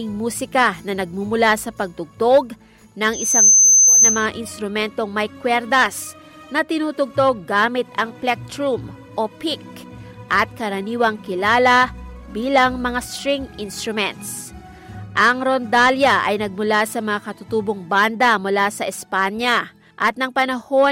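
A loudspeaker feedback squeal rises from 3.13 to 4.26 s. A 6.2 kHz tone swells in under half a second, ending roughly 10 dB above the sound. The microphone is re-amplifying its own loudspeaker.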